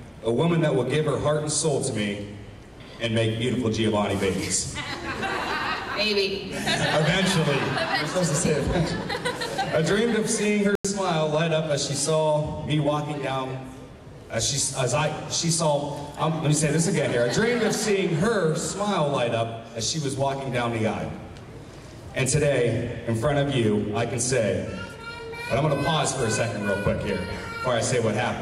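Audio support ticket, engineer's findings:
Corrupt FLAC frame, 3.74–4.04 s. Garbage audio, not silence, with the error reaching about -22 dBFS. Checksum unchecked, so predictor decoding ran on flipped bits. Span fits roughly four frames. Unlike muting, the damaged audio plays out, and the next intact frame recovers cleanly.

Corrupt frame muted, 10.73–10.85 s. Abrupt hole of silence, about 0.12 s, consistent with two frames rejected by the decoder and replaced by the player with silence. Unlike an unchecked corrupt frame, the rejected frames are not played, and timing stays intact around the gap.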